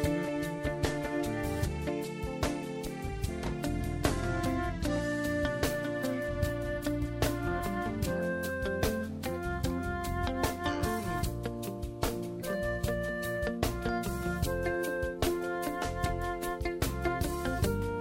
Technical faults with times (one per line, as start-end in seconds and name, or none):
none